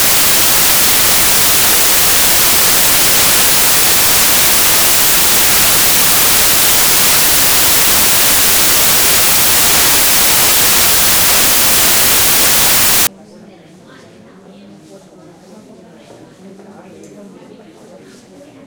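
From the start of the clip to 13.07 s, the audio suffers from samples built from the wrong bytes. The reader assembled each sample's bytes incorrectly, through a one-byte offset, a swapped byte order or a wrong alignment, so the rapidly changing low-order bits land in the most significant position. The sound becomes loud, harsh broadband noise. A spectrogram shows energy smeared across the whole band, and the waveform becomes a dense, noise-like block until the fault ends at 13.07 s.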